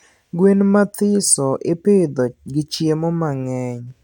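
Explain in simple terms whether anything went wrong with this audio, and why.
Nothing went wrong; no faults can be heard.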